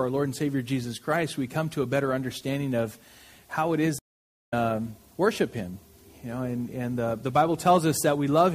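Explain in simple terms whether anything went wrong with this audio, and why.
A stream reconnect happens from 3.99 to 4.54 s. The connection dropped, so the player went quiet for about half a second, then reconnected and started decoding again partway through the stream. Because the stream kept moving while the player was cut off, the sound doesn't pick up where it stopped. It resumes roughly half a second further on, so that stretch of the audio is simply missing.

MP3 compression damage runs through the whole clip, and heavy lossy encoding is the likely cause. To save space, the encoder discards the parts of the sound it judges least noticeable. Here it discarded too much: faint details flicker in and out from moment to moment. That gives the audio a watery, swirling quality, with metallic chirps on hissy sounds and blurred, softened attacks.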